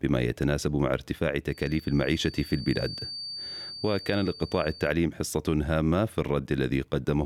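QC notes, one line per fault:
1.45–4.96 s: feedback whistle, a thin single-pitch 4.6 kHz tone about 15 dB under the sound; likely a speaker-to-mic loop held just short of runaway.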